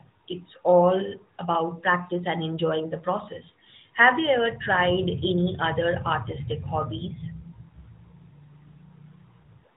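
No technical faults can be heard in the speech. The AMR narrowband mobile codec path is working normally, cutting everything above 4 kHz and leaving only light coding traces, which fits its highest 12.2 kbps mode.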